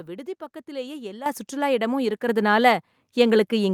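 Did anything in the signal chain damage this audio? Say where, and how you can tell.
Yes. The microphone volume was stepped up in call processing, by about 10 dB at 1.26 s (before "சுற்றுலா இடமும்") and about 4 dB at 2.28 s. Background rises with the speech instantly, unlike a gradual gain ramp.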